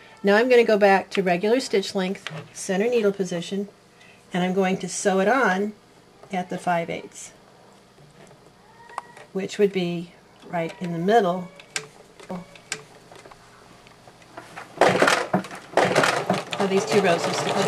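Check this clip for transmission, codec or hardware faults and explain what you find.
There's one fault here, a doubled audio track, from 12.31 s to the end. A second full-band copy cuts in abruptly, trailing about a second behind at roughly the same level, dry with no decay. The likely cause is a slower capture path or an edit holding two out-of-step copies.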